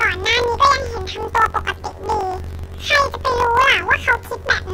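Throughout the speech, planar audio is read as interleaved. Each 21.33 ms block plays twice at double speed, giving an octave-high sound with a 46.9 Hz flutter, consistent with 1024-sample blocks.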